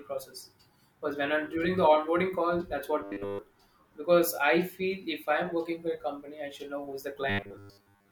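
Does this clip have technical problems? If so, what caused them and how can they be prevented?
Yes. Robotic sound from repeated short buffers occurs at 3.02 to 3.39 s, after "the onboarding call that's", and at 7.30 to 8.12 s, after "should know who's the". The speech turns into a rigid 100 Hz buzz, fully in the first and mostly in the second. This was likely a 10 ms chunk replayed while fresh audio arrived too slowly. A larger buffer and steady processing load would prevent it.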